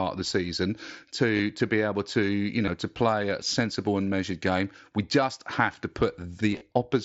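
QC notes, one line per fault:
1.37–1.39 s, 2.66–2.68 s, 6.52–6.61 s: concealed Bluetooth headset packet loss. Lost packets before "to be able to" and before "to play a sensible" were patched by repeating the preceding waveform. The late cluster's gaps were brief, the longest run lasting about 22.5 ms.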